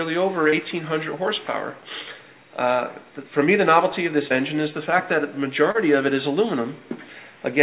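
At 0.50–0.55 s, 4.28–4.33 s and 5.71–5.77 s, short concealed packet loss occurs. Roughly 30 ms of audio missed the decoder each time, so the receiver extended the preceding sound and blended back. Each gap is heard as a brief smear or wobble in band-limited, 4 kHz call audio.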